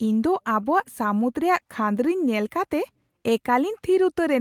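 No dropouts, clicks, distortion or timing faults occur anywhere in the recording.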